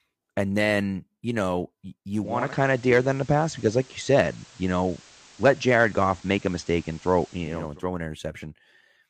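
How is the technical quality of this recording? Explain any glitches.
The recording has one clear glitch, lasting several seconds in the middle of the speech.

From 2.14 s to 7.81 s, just after "then you know", hiss rises to roughly 25 dB below the signal and the level shifts by about 4 dB. This is digital radio blending to analogue: the receiver lost its digital stream and cross-faded over 472 ms to the station's FM broadcast, then back.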